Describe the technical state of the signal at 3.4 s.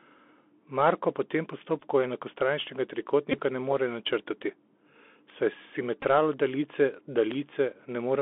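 At 3.4 s the signal is at the tail of a Bluetooth headset packet repeat running from 3.32 to 3.40 s, just before "ne more načrtati". Headset voice packets dropped out, and the chip decoded the previous packet's bits over and over, filling about 18.8 ms. That length fits roughly five lost packets. Repeating every 3.75 ms, it gives a short steady buzz near 267 Hz. On a spectrogram this appears as evenly spaced harmonic lines at multiples of 267 Hz. The waveform shows identical short segments tiled end to end.

Beneath that, the whole passage carries the Bluetooth CVSD headset codec. At 64 kbps CVSD sends one up-or-down bit per sample with an adapting step, and here the line band is held to about 250 Hz to 3.5 kHz. The damage is plainly audible: a granular hiss, scratchy sibilants, and distortion where loud high content outruns the step size. A spectrogram shows a hard ceiling near 3.5 kHz with a grainy noise floor. 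On the waveform, steep edges become staircase-like slopes.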